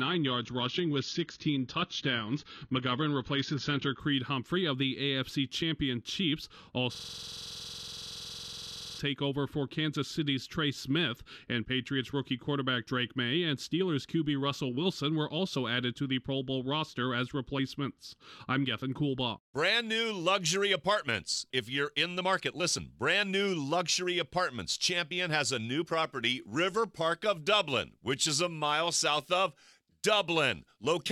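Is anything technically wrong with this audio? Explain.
Yes, there are two faults.

From 0.0 to 4.0 s, an adaptive stream starting at a low bitrate leaves nothing above 6.9 kHz, with harsher codec artefacts. The spectrogram shows a flat ceiling that lifts abruptly, which points to a jump from roughly 24 to 96 kbit/s AAC.

From 6.95 to 8.99 s, a system hang loop repeats one 46 ms slice 44 times, a rattling buzz at 21.5 Hz. The waveform shows identical blocks, consistent with a 2048-sample buffer.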